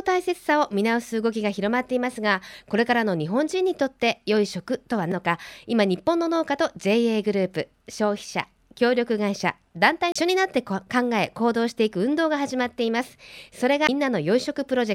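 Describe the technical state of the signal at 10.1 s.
At 10.12 to 10.16 s there's a CD skip: the laser jumps to another turn of the disc's spiral, so playback mutes for about 30 ms, then picks the speech up again from a different spot on the disc.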